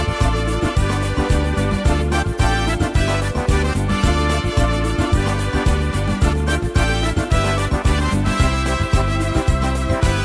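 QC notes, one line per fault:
No faults found in this clip.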